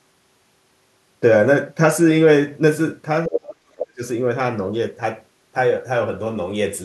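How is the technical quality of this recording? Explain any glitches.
The recording has two linked glitches in one short stretch, both around the same moment of overlapping talk.

From 3.26 to 4.03 s, the speech is suppressed in double talk. The talker's voice sinks sharply, falling by roughly 40 dB at its deepest, across most of that span. The likely cause is an echo canceller that heard both sides at once, could not tell the talker from the loudspeaker echo, and turned everything down.

Within that dip, from 3.33 to 3.39 s, the other side's voice leaks through as a brief scrap only a little quieter than the talker. It is a fragment of the far-end voice playing from the device's own loudspeaker, most likely residual echo that the canceller failed to remove from the microphone signal.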